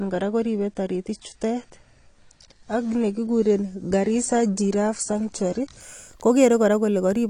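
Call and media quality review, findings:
Muffled, band-limited speech with nothing above 9.8 kHz, 0.0–5.8 s, then abrupt gapless clarity. Adaptive stream starting at a low bitrate, consistent with AAC near 32 kbit/s stepping up to about 96 kbit/s.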